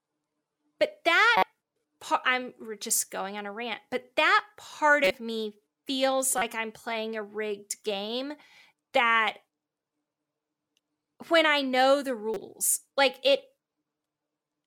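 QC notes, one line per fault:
1.36–1.43 s, corrupt frame decoded: flipped bits in about two compressed frames misplace energy, giving a loud chirp near −10 dBFS, seen as a short smeared spectrogram patch.
5.04–5.15 s, corrupt frame decoded: a burst spanning roughly three frames decodes with wrong gains, a squeaky noise burst near −10 dBFS showing as a boxy broadband block.
6.38–6.42 s, corrupt frame decoded: a very brief blip, likely several damaged short frames, peaking near −10 dBFS, appears as a narrow vertical stripe on the spectrogram.
12.34–12.37 s, corrupt frame decoded: misread codes across a couple of frames add a quieter blip near −25 dBFS, a faint isolated smudge.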